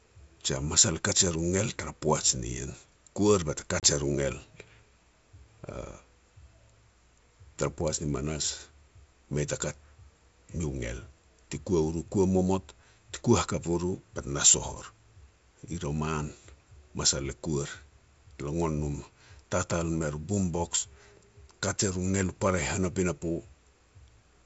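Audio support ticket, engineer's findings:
Packet loss on the ADPCM call (G.722 path, 64 kbit/s), 3.80–3.86 s, after "poaj nien kuar bate": about 30 ms silenced, likely a few packets. Decoder predictor and step size desynchronised. Hard-edged gap, then "er u ngel" resumes slightly distorted until reconvergence.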